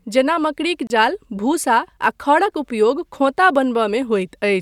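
At 0.87 s the speech breaks for about 29 ms, ending at 0.90 s: a gap at a join of encoded pieces, where separately encoded segments were spliced with their encoder delay and end-frame padding left untrimmed. Unlike a dropout, nothing is lost. The sound resumes exactly where it stopped, and the codec softens the silence's hard edges.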